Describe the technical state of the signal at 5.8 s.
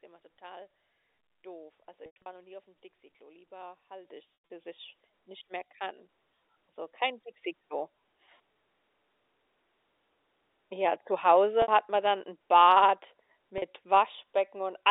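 At 5.8 s the speech is intact, with no fault present, carried over the normal narrowband telephone path that holds it to roughly the 300 Hz to 3.7 kHz line band.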